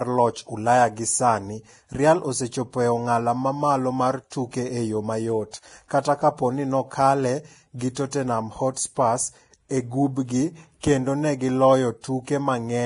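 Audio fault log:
Throughout, Vorbis compression: the speech sounds hissy and grainy, with a rough, fizzy texture on voiced sounds, smeared consonant onsets, and no content above 10.6 kHz. The likely cause is heavy Vorbis encoding at a low quality setting, which fits a bitrate of around 30 kbps. At that rate the encoder cuts the top band and quantises the remaining treble so coarsely that fine detail turns into noise of similar energy.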